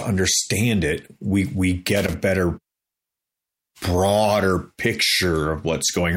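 At 1.96 s the speech is broken by loose connector crackle lasting about 0.2 s, until 2.16 s. A worn or dirty contact somewhere in the signal path is shifting. It opens and closes many times in quick succession, so the audio is chopped into fragments. Any DC present on the line turns each break into a pop. The result is a short, irregular burst of scratchy crackle over the speech.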